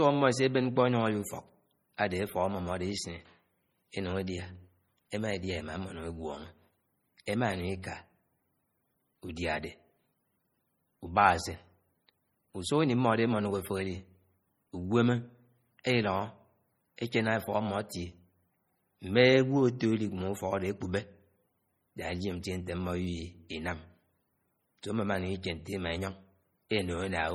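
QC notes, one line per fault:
Throughout, MP3 compression: the speech has that watery, swirly quality, with s sounds going metallic and chirpy and consonant attacks smearing. The damage is heavy, which fits a very low bitrate around 32 kbps, and it's likely an MP3 encode starved of bits. The encoder is dropping weaker frequency lines, which flicker in and out from frame to frame. There's no content above 21 kHz.
15.84 s, pre-echo: a short hiss, about 13 ms long, creeps in just ahead of a sharp attack, and the attack itself lands soft and smeared rather than crisp. That happens when a transform codec spreads its quantisation noise evenly across a whole block. The noise sized for the loud onset also fills the quiet gap right before it, so you hear it arriving early.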